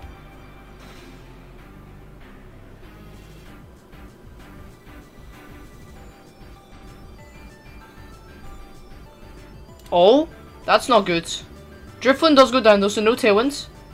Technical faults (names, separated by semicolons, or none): AAC frame loss with concealment